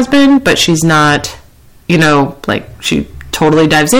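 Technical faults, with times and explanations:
Throughout, hard clipping: speech driven about 13 dB past full scale, roughly a tenth of samples flattened, giving harsh fuzz on every loud sound rather than occasional peak crackle.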